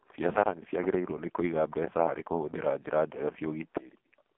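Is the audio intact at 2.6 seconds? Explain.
No. At 2.6 seconds, as throughout, the speech carries heavy AMR narrowband mobile codec damage. A vocal-tract model rebuilds each frame from a few pulses. Nothing passes above about 3.8 kHz. The voice sounds buzzy and synthetic, which fits a very low bitrate near 5 kbps.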